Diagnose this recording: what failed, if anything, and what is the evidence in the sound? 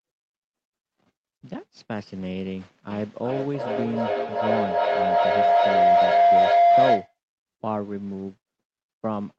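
Feedback howl from 2.9 to 7.18 s. The failure is acoustic, in the room around the call rather than in the wiring or converters. A second device on the same call let the loudspeaker feed back into the microphone with net gain on each trip, so the repeats grew instead of decaying. They narrowed to a tone near 700 Hz, pulsing about every 400 ms at the loop's delay, and peaked about 11 dB above the speech. Through the Opus call path the audio stays band-limited near 8 kHz.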